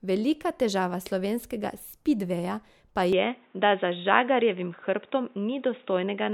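A speech clip whose sound turns abruptly dull and boxy at 3.13 s, just after "težava slovenskega spidveja pa", and stays that way to the end at 6.33 s. This is most likely an input switched to a poorer device, with a narrowband microphone or headset call profile cutting everything above 3.8 kHz and adding faint new background noise roughly 40 dB below the speech. On a spectrogram, the upper bands vanish at that instant under a flat ceiling. The waveform shows no gap and no level step.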